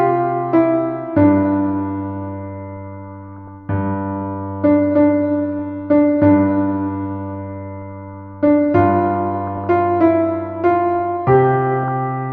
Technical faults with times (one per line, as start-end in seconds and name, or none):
0.00-12.32 MP2 compression
3.28-3.49 DAB burbling
5.59 DAB burbling
7.80-7.99 DAB burbling
9.47-9.67 DAB burbling
11.83-11.88 DAB burbling